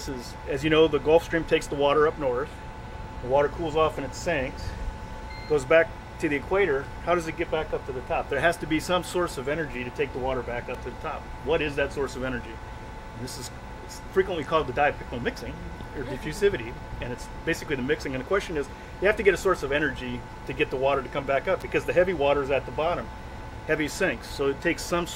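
A nearby switch, motor or static discharge likely arced, and the audio line picked up the burst as an electrical switching spike. It lands twice: at 10.74 s as a sharp snap sitting on top of the sound at a modest level, well below full scale, and again at 21.61 s as a slightly louder snap, a tight cluster of clicks lasting about 16 milliseconds.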